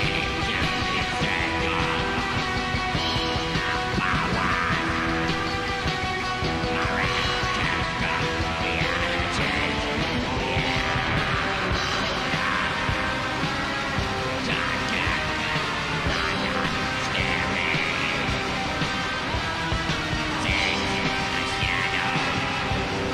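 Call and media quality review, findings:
No audible faults found in this recording.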